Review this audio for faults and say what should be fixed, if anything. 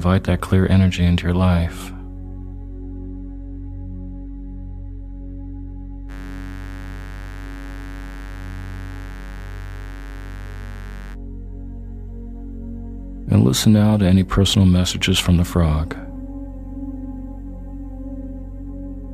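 Mains buzz runs from 6.07 s to 11.17 s as a steady, raspy buzz sitting roughly 20 dB below the programme. Its base is 50 Hz. The rasp comes from sharp switching spikes, twice per mains cycle, entering the signal path through a dimmer, a rectifier or a missing shield. Those spikes spread harmonics of 50 Hz well up into the kilohertz range. That is why the fault sounds edgy rather than like a pure low hum.

To prevent it, keep audio cabling and gear away from dimmers and switching supplies, use properly shielded balanced connections, and check the grounding before recording.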